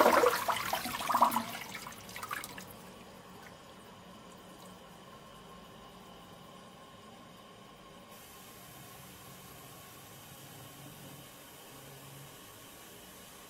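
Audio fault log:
No audible faults detected.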